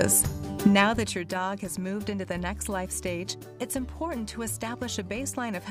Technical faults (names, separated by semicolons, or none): zipper noise